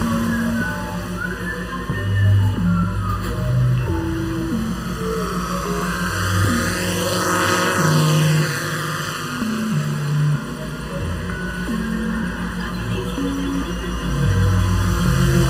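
The whole clip has a hollow, phasey colour from channel delay (comb filtering). One channel trails the other by well under a millisecond, so the mono sum cancels at evenly spaced frequencies, with the first notch somewhere around 700 Hz and more following above.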